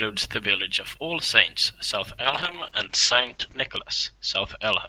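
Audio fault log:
2.23 to 4.88 s, call bitrate drop: the speech loses everything above 8 kHz and turns rough and watery, which fits the encoder being cut from 32 to 8 kbps. Unlike packet loss, nothing drops out; coding stays continuous but coarser, worst for 1.37 s.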